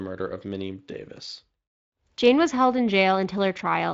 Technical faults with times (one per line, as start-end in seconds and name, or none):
none